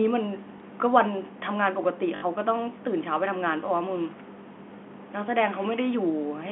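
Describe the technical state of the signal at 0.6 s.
Packet loss with the last packet repeated occurs from 0.58 to 0.60 s. About 20 ms of audio went missing, which fits a single lost 20 ms packet, and the receiver filled the hole by replaying the preceding packet. The copied stretch is unlikely to line up with the waveform's pitch cycle, and the single repeat is heard as a small blip. A plain dropout would leave a silent gap instead, and there is none here.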